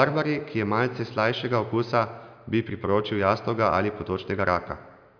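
No technical faults can be heard anywhere in the speech. There is nothing in the audio to point to or explain.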